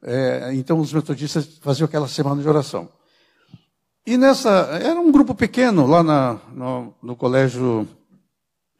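Nothing jumps out here at all: no dropouts, glitches or other technical faults turn up anywhere in this recording.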